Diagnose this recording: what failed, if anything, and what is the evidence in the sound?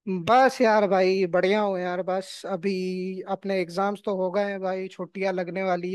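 No fault found in this recording.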